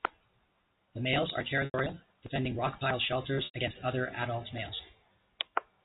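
At 1.65 s, just after "males are", there is packet loss with pitch repetition. About 90 ms of audio is missing, which fits three lost packets. The receiver fills the gap by repeating the last pitch period. It fades that out, so the sound holds briefly with a buzzy tone, then thins toward silence. Speech resumes with a short cross-fade at "defending rock pile shelters". The same fault recurs at 3.45 s, after "defending rock pile shelters" and before "against other adult males", again for about 90 ms. The G.711 telephone coding keeps everything below 4 kHz throughout.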